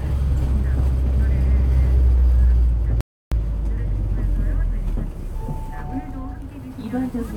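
At 3.01 s the player most likely ran short of buffered data, or its playback thread was held up, so nothing was sent to the output until it caught up. This is a playback stall. The sound cuts out abruptly in mid-flow and the output stays completely silent for about 310 ms, until 3.32 s, before audio resumes. The gap is long enough to register clearly as a dropout rather than a click.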